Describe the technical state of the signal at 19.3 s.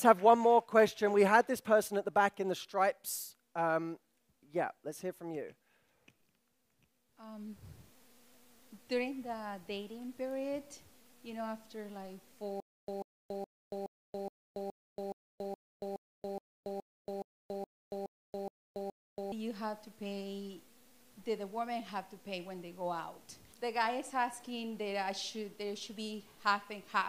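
At 19.3 s the signal is at the very end of a stutter with silent gaps running from 12.60 to 19.32 s. The likely cause is a stalled player or stream: at each retry it replayed its last fragment and then ran dry. The result is a 140 ms burst of the same sound repeating 16 times, each followed by about 280 ms of silence, giving an even beat every 420 ms. The audio that should have played during this span is missing.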